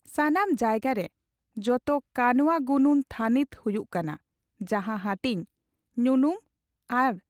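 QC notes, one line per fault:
No fault to note.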